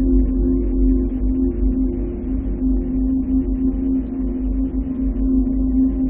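A short recording of everyday sounds with nothing technically wrong to flag anywhere in it.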